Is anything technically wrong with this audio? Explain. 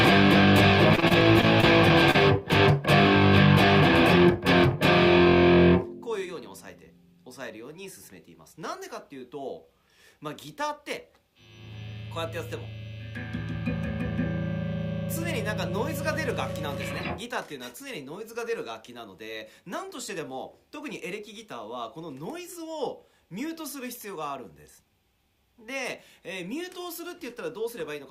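Yes, two related transmission faults affect the opening seconds.

From 0.95 to 1.65 s the sound turns choppy, with small pieces dropping out. This is repeated packet loss (robotic sound): six gaps, the longest 24 ms, were patched by extending the preceding sound, so about 17% of that stretch is synthetic fill.

Between 2.11 and 2.16 s there is a brief smear where the audio wobbles momentarily. This is short concealed packet loss: roughly 20 ms of data arrived too late, and the receiver bridged it with 32 ms of continued sound before blending back into the real signal.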